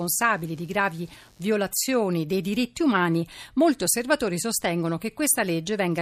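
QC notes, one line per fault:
0.0–2.0 s computer activity noise: faint buzz pulsing around 100 Hz, roughly 35 dB below speech, from computer load disturbing shared ground; regular vertical spectrogram striations.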